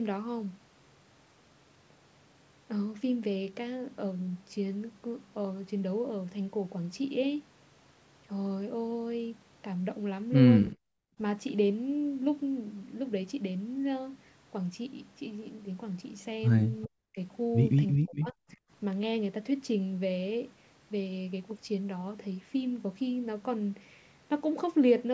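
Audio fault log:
10.71–10.76 s and 18.51–18.57 s, echo leak: the far side's echo canceller likely left part of its loudspeaker pickup uncancelled and sent it back. A faint scrap of the voice returns 396 ms late, roughly 30 to 35 dB below the main speech, short.
10.74–10.79 s, 16.85–17.18 s and 17.97–18.43 s, speech suppressed in double talk: with both sides talking at once, the echo canceller likely could not separate the talker from loudspeaker echo and turned both down. The voice drops by around 40 dB, cutting out for about 50 ms, then for stretches near 0.3 and 0.4 s.
11.08–11.18 s, background gated by the echo canceller: while the loudspeaker was playing, the canceller clamped the microphone hard. The room sound sinks by about 39 dB for roughly a tenth of a second, then comes back as the canceller releases.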